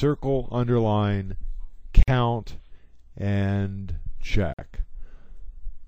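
Two short dropouts cut into otherwise continuous audio, a gap at a join of encoded pieces at 2.03 s (48 ms) and again at 4.54 s (50 ms), each time resuming right where it stopped. Separately encoded segments were butted together untrimmed, leaving encoder start delay and end-frame padding in place.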